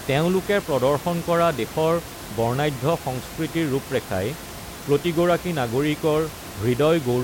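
No technical faults are audible.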